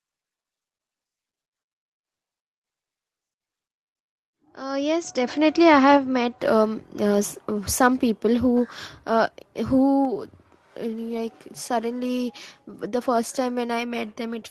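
A speech clip with two sudden drops in level, each affecting voice and background together. At 9.03 s the level falls by about 2 dB, and at 10.05 s by about 3 dB more. This is likely the microphone volume stepped down by the call software reacting to loud input. The call path, heard through its Opus-style coding, tops out around 8 kHz.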